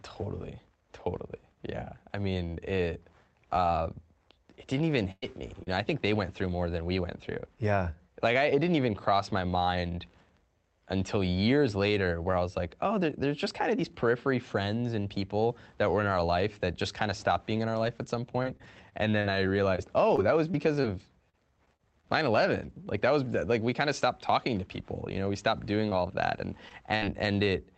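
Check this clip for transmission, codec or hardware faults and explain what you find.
Four kinds of network fault are audible, all from packet loss on a call link carrying speech over Opus. The sound stays band-limited to about 8 kHz throughout.

A burst of packet loss runs from 5.11 to 5.24 s. Roughly 100 ms of audio never arrived. The receiver extended the last sound for about 106 ms and faded it out. That is heard as a held buzz or hiss dying away, with about 30 ms of near silence. The final stretch, 5.22 to 5.24 s, is patched differently, as described next. Speech then resumes with a chunk missing.

Lost packets rebuilt from error correction appear at 5.22 to 5.24 s, 5.66 to 5.68 s, 5.72 to 5.74 s and 5.90 to 5.92 s. Each is a single 20 ms frame. The following packet carried a low-bitrate backup copy, and the decoder played that instead of leaving a hole. These frames sound grainier and noisier than their surroundings, but there is no dropout.

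A short concealed packet loss falls at 5.63 to 5.68 s. About 40 ms was lost. The decoder synthesised about 33 ms by continuing the preceding sound, then blended back into real audio. Its last 20 ms came from the backup copy. The result is a brief smear or wobble, and a short consonant here can disappear.

Scattered short gaps run from 17.68 to 27.04 s. Around fifteen separate losses occur, one here and one there. The longest is about 50 ms, and about 360 ms is lost in total. Roughly 400 ms was concealed by extending the previous sound, about 4% of that stretch. A further 940 ms was rebuilt from backup copies. Speech is mostly clear between the gaps but carries recurring ticks, hiccups and rough, grainy patches.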